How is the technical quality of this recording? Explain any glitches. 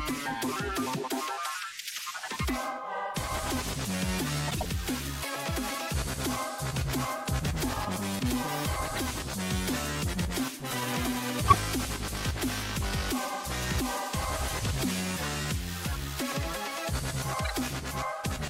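The recording has five short glitches, all of them corrupt frames that were decoded and played: 1.90–2.04 s, 4.48–4.66 s, 8.95–8.98 s, 11.47–11.57 s and 17.44–17.51 s. Damaged bits in the compressed stream made the decoder rebuild energy at the wrong frequencies, giving brief chirps or noise bursts spanning what sounds like one to several frames. The loudest, at 11.47 s, peaks near −10 dBFS; the others sit around −20 to −25 dBFS. On a spectrogram each appears as an abrupt, blocky patch of misplaced energy with sharp frame-edge boundaries. The waveform shows short spiky bursts.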